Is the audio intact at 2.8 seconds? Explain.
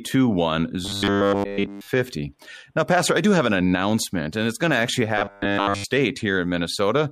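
Yes, the speech at 2.8 seconds is intact, with no audible fault at that moment.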